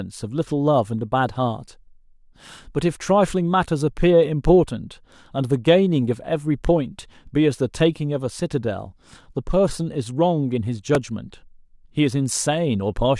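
At 10.95 s a repeated buffer interrupts the speech: fresh audio arrived late, so a tiny 2.67 ms slice, which fits a 64-sample buffer, played three times in a row. Unlike a simple dropout's silent gap, it sounds as a brief buzzy click with hard joins, losing a few milliseconds.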